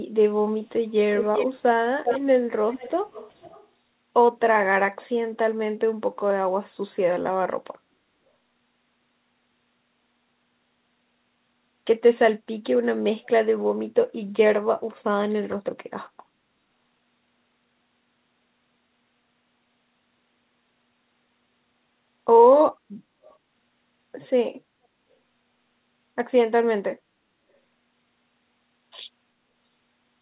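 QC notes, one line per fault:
1.11–1.49 s, 2.04–2.19 s, 2.70–2.93 s, 3.10–3.67 s, 13.24–13.28 s, 23.26–23.36 s: echo leak. A copy of the speech returns 396 ms late, strongest in the first cluster, where it ranges from as loud as the direct speech down to about 20 dB below it. The two later events are faint traces. The likely cause is a far-end speakerphone whose echo canceller let residual pickup through. The echo stays within the narrowband G.711 path, with nothing above 4 kHz.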